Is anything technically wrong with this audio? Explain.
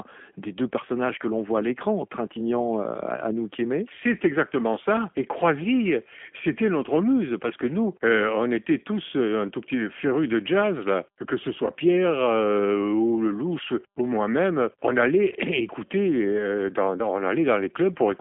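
Yes. Throughout the speech there is plainly audible G.729 codec damage. The speech is rebuilt from a vocal-tract model and a few pulses per frame, consistent with an 8 kbit/s codec, so it sounds rough and synthetic, confined to 250 Hz to 3.4 kHz, with nothing above 3.5 kHz.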